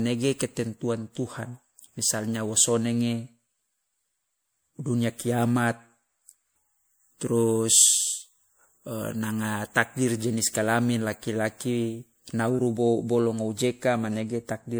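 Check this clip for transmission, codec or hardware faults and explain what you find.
One codec fault is present across the whole speech clip: generation loss. The audio sounds swirly, smeared and hollow, with blurred consonant attacks, beyond what a single MP3 pass would leave. The likely cause is about four MP3 encode-decode cycles, consistent with 96 kbit/s, each requantising on a shifted frame grid so that noise and spectral holes accumulate.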